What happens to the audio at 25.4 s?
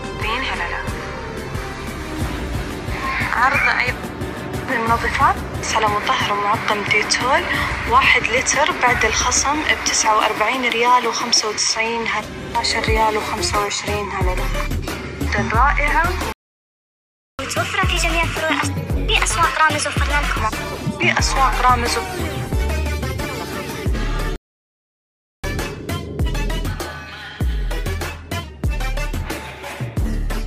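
At 25.4 s the audio comes back after a playback stall. From 24.36 s it cuts out in mid-flow for about 1.08 s of silence. The likely cause is the player running dry of data or having its thread blocked. On a waveform this shows as a flat line with abrupt edges, and a spectrogram shows a clean blank vertical band across all frequencies.

From 25.44 s to 28.44 s comes the catch-up at higher speed. The player works through its backlog by resampling at 1.1 times normal rate, so everything runs faster and sits roughly a semitone and a half sharp. On a spectrogram the harmonic lines step upward and events crowd closer together for those three seconds.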